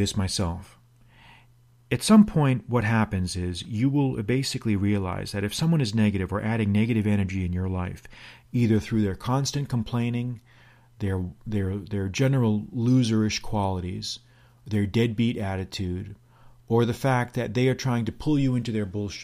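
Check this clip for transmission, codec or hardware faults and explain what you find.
No transmission, codec or hardware faults can be heard anywhere in this speech recording.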